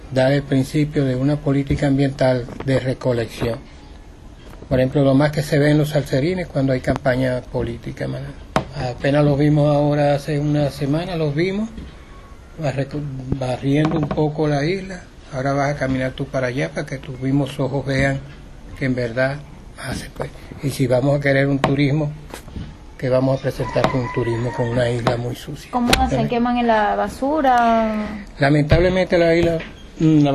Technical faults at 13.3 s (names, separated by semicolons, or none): loud pop